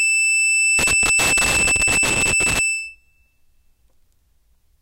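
From 0.79 to 2.59 s the music breaks into an irregular burst of crackle and scratching, a loose connector crackle from a worn or dirty contact intermittently chopping the signal.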